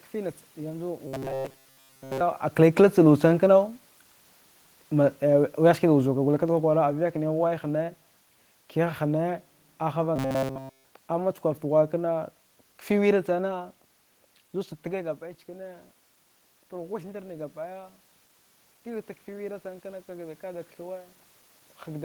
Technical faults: robotic sound from repeated short buffers; automatic gain falling; automatic gain rising

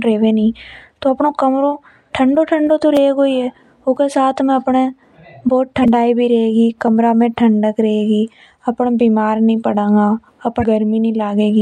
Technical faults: periodic USB or driver dropouts; damaged data in a compressed stream

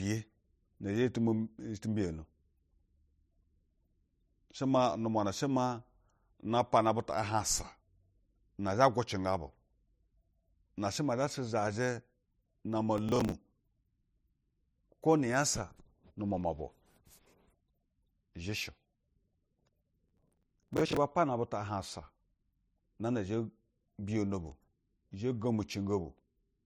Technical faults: processor overload crackle

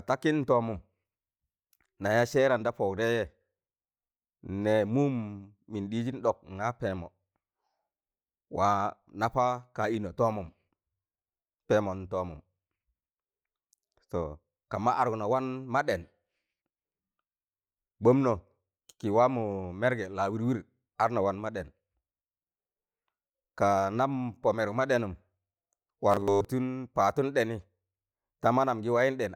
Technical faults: robotic sound from repeated short buffers

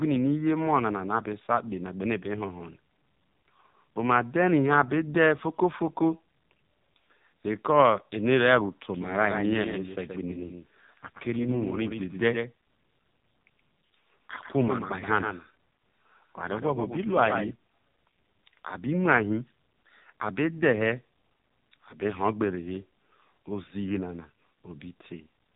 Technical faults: AMR narrowband mobile codec; doubled audio track

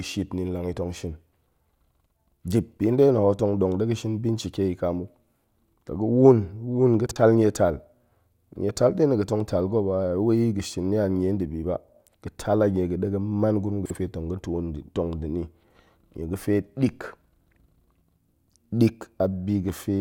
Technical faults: frames out of order

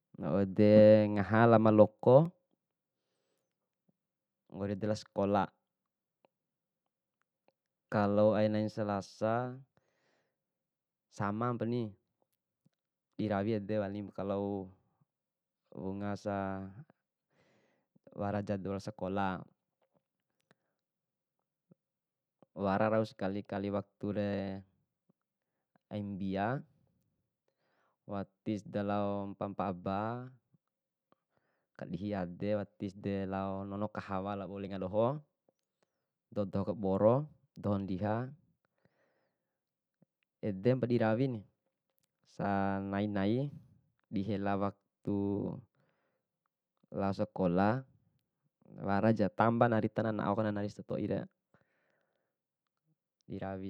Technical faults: block of digital silence

